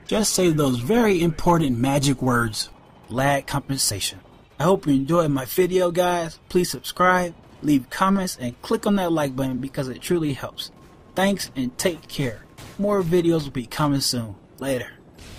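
No technical faults detected.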